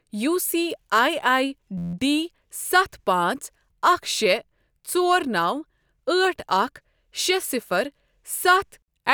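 At 1.78 to 1.94 s, just after "یو سی آی آی", a system hang loop occurs: the system stalled while the audio hardware kept replaying the same 11.6 ms ring buffer, which fits a 512-sample buffer. That fragment repeats about fourteen times, producing a steady 86 Hz buzz.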